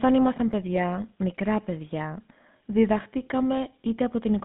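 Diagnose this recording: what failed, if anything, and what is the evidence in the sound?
GSM full-rate codec damage is present throughout the speech, a fault at the codec stage. The audio is confined to a phone band of roughly 150 Hz to 3.6 kHz, and a plainly audible buzzy, gravelly roughness sits on the voice. The codec models the vocal tract as a filter and drives it with a coarse, regularly spaced pulse excitation rather than the real waveform, and that excitation produces the grit. The damage fits a 13 kbps full-rate link.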